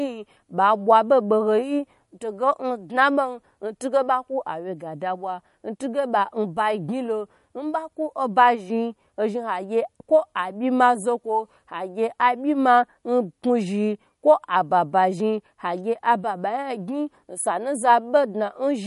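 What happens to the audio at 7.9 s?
At 7.9 s the speech carries damage from what is likely MP3 compression, present throughout the clip and plainly audible. Starved of bits, the encoder drops everything above 11.2 kHz and switches weak frequency lines on and off, leaving a dull, watery swirl on s sounds, which fits a low bitrate near 48 kbps.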